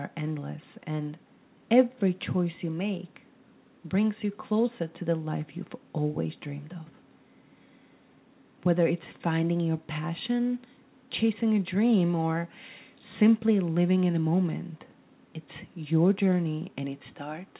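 No technical faults can be heard; the audio has passed through a telephone-style call path, and nothing reaches above 4 kHz, which points to a narrowband codec such as G.711.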